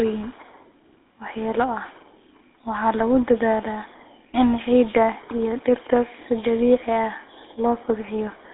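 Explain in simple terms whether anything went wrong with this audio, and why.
The speech sounds buzzy and gravelly from start to finish, like an old mobile phone call, with a thin, muffled tone. Nothing comes through below about 300 Hz or above about 3.6 kHz, so the depth and the crisp edges of consonants are missing. The cause is the GSM full-rate codec, an early mobile phone coding method. It rebuilds the voice from a rough model of the throat and mouth, driven by a coarse pulse pattern, which creates that grainy roughness.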